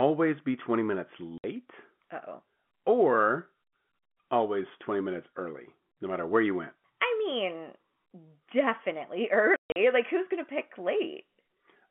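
At 1.38 s the speech drops to dead silence for 60 ms, and from 9.56 to 9.76 s it breaks up again, losing 180 ms within 200 ms with the longest hole 140 ms. This is packet loss filled with silence: the hole lengths point to 20 ms packets, and nothing was concealed. Each gap starts and stops abruptly, unlike a fade or a smeared, repeated concealment. The speech around both gaps carries the G.711 telephone band.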